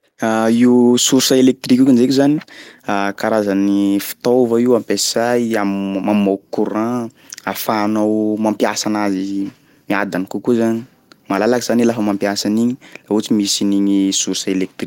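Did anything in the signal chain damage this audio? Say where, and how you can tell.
No, nothing in the signal chain damaged this speech.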